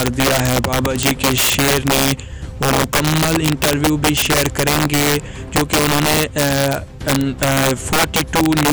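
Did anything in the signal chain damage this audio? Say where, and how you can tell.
Yes. Integer overflow in a fixed-point gain or format-conversion stage. Throughout, loud peaks driven about 8 dB over full scale wrap to the opposite sign, producing violent cracks.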